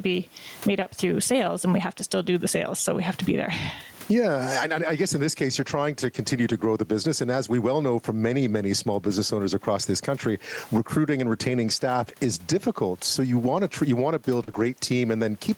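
Throughout the recording the level pumps, a swing of around 15 dB, so loud and soft passages sit squashed close together. The room noise sits about 38 dB below the speech. This is gain pumping, likely from gain set far too high with a fast limiter clamping it back down.

Right after "you want to build", at 14.43 s, the sound smears and wobbles for about 40 ms. This is short concealed packet loss. Audio missed the decoder, which filled the hole by extending the preceding sound before blending back into the real signal.

Overlapping the end of that, from 14.47 to 14.49 s, the sound turns rougher and noisier. This is a lost packet rebuilt from error correction: a low-bitrate copy carried in the following packet was played in place of the missing audio.

At 14.51 s a second short concealed packet loss adds about 20 ms of extrapolated, smeared sound.

From 14.55 to 14.69 s, about 80 ms is again rebuilt from error correction, across four separately lost packets. 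The audio stays gapless, but it sounds grainy and coarse.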